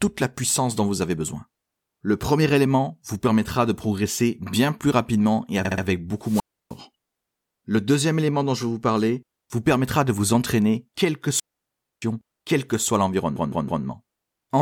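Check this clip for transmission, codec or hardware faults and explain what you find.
Two kinds of fault are present in this speech clip: repeated frames and wireless microphone squelch dropout.

Repeated frames occur at 5.65 to 5.84 s, after "bien plus rapidement et". A 64 ms block plays three extra times, adding 192 ms. They recur at 13.36 to 13.84 s, after "quel que soit", where a 160 ms block plays three extra times, adding 480 ms. Compressed frames were delivered more than once, so the decoder replays them. The result is an audible stutter.

Wireless microphone squelch dropout occurs at 6.21 to 6.77 s, with a 308 ms mute. It recurs at 11.28 to 12.02 s, between "de vous entraîner quelle" and "quel que soit", with a 624 ms mute. The FM link faded and the receiver's squelch closed, giving a brief surge of hiss followed by near-silence.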